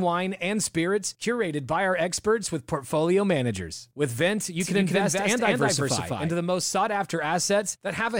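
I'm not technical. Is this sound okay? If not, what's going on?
No. From 4.6 to 6.34 s, starting just as "the most sought" is said, there's a doubled audio track: a second, equally loud copy of the speech trails about a fifth of a second behind, then cuts off abruptly. Likely a second recording path or an editing slip.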